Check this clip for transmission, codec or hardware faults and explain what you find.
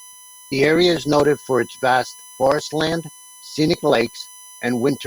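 One hardware fault runs through the speech. USB whine is present from start to end: current drawn in 1 ms bus frames leaks through power or ground, adding a fixed-pitch tone at 1 kHz with harmonics strongest near 11 kHz, roughly 25 dB below the speech.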